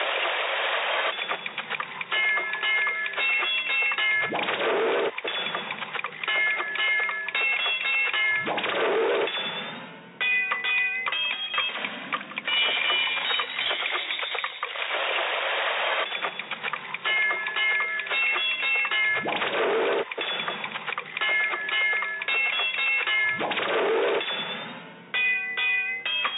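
No technical faults can be heard anywhere in the audio. There is nothing to mark at any point along its length.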